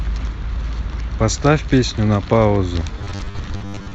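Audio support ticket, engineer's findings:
Rigid metallic buzz fixed at 100 Hz, 2.99 s to end. Robotic sound from repeated short buffers: likely starved input looping 10 ms chunks, roughly half the audio repeated.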